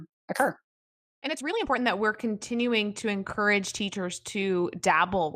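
From 0 to 1.78 s the speech runs noticeably fast, about 1.67 times normal pace, with a rushed texture while the pitch stays put. This is a time-stretched section, likely squeezed by software that dropped short slices of audio to shorten it without raising the pitch.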